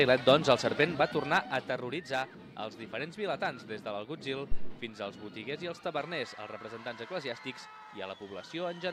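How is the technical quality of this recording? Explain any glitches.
One glitch stands out. Zipper noise from 0.68 to 2.07 s: the level drops by roughly 10 dB in unsmoothed steps, around fifty per second, so each step clicks, giving a rapid zipping texture.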